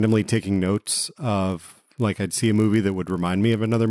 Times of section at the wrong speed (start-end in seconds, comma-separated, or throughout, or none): none